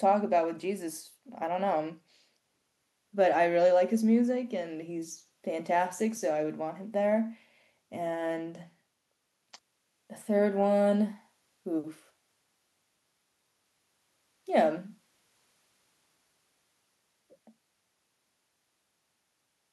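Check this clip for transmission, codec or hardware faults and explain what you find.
No transmission, codec or hardware faults are audible anywhere in the recording.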